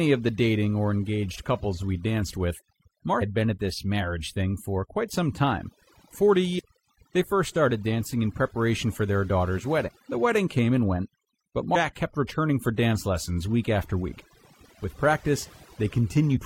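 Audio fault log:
Throughout: overdone noise removal. Noise reduction set far too strong gates individual frequency bands down whenever they approach the noise estimate, taking quiet speech detail with them. The background sinks to near silence with twinkling specks. On a spectrogram, isolated flickering dots appear in an otherwise empty floor.
3.18–3.22 s, 6.55–6.60 s, 9.84–9.90 s, 11.71–11.76 s, 16.32–16.38 s: damaged data in a compressed stream. At each point the decoder hits corrupted frames, loses sync and hunts for the next valid header, producing a brief chirp or blip of roughly 45 to 60 ms. A spectrogram shows a short broadband smear, and the waveform shows a discontinuity.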